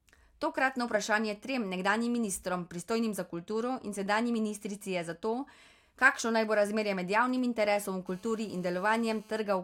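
From 6.35 to 7.87 s, GSM signalling bursts break into the speech. A 2G phone close to the recording chain is sending short groups of radio bursts, the kind it sends before a call or a text arrives. The audio circuitry rectifies that radio energy into sound. The result is a galloping dit-dit-dit of brief buzzes at about 217 Hz. It sits faint, well below the speech level.

At 8.07 s a GSM phone buzz takes over and runs to 9.40 s. The phone is now in a call, transmitting bursts 217 times a second without pause. Again the circuit rectifies the pulses. This time the buzz is continuous, hard and raspy, rich in harmonics of 217 Hz. It bears no relation to the speech. It stays nearly steady at about 30 dB below the speech.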